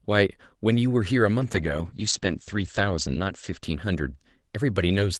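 Speech carried over an Opus call path. A call bitrate drop starts at 1.41 s and lasts to the end. The coding turns coarser and rougher, and the top end narrows from 12 kHz to 8 kHz. That fits the encoder falling from about 32 to 11 kbps, bottoming out for 1.14 s.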